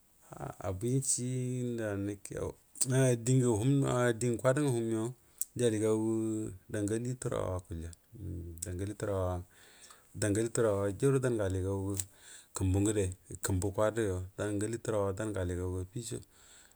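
No audible technical faults.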